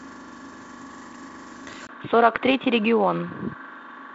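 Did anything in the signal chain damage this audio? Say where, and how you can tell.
Yes, at the input stage: from 1.87 s the capture likely switched to a poorer device, after a 20 ms gap. Everything above 3.8 kHz vanishes, the level drops by roughly 10 dB, and a new noise floor appears around 40 dB down.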